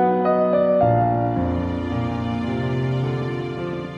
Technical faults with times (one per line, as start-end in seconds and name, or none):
0.98-3.86 train of clicks